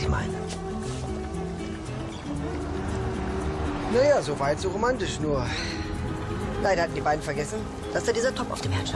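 At 5.58 s the audio suddenly runs faster and higher, and it stays that way to the end at 8.96 s. This is a wrong sample rate fault. The samples are played back faster than they were captured, with no conversion between the two rates. Speed rises by about 1.09 times, and pitch rises by about 1.5 semitones. The size of the shift fits audio recorded at 22 kHz but played at 24 kHz.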